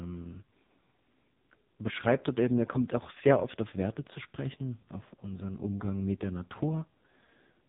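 From start to finish, the speech carries heavy AMR narrowband mobile codec damage. Nothing above 3.8 kHz survives, so the voice sounds boxed in and muffled, like an old phone call. The codec rebuilds speech from a simple vocal-tract model fed by sparse pulses. At this level of damage, which fits one of AMR-NB's lowest modes near 5 kbps, too few pulses remain. The voice turns buzzy, thin and synthetic.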